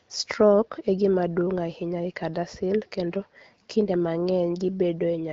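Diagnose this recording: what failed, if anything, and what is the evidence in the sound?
Nothing has failed: the speech comes through an AMR wideband (HD Voice) path at 12.65 kbit/s, a rate at which that codec keeps speech clear, with the band topping out near 7 kHz and only the light coding imprint expected at that setting.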